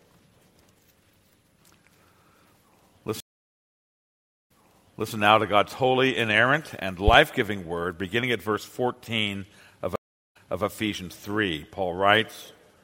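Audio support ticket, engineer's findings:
Stream reconnect at 3.20 s: audio drops out for about 1.3 s, comes back at 5.12 s with roughly 0.63 s replayed. Connection broke and the player spun up a fresh decoder mid-stream, with the server resending a chunk it had already played. Second stream reconnect at 9.96 s: shorter gap, about 0.39 s, resuming at 10.64 s with around 0.29 s repeated. Same mechanism, so check the network path and player buffering.

Loud pop, 7.08 to 7.16 s: two sharp pops in quick succession, about 15 dB over the program, with the sound carrying on underneath. Likely a voltage step from a plug, switch, static discharge or driver glitch, shaped by the downstream circuitry. Worth checking cabling and the hardware chain.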